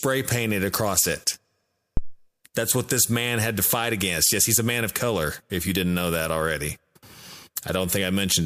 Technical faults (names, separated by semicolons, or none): phantom power thump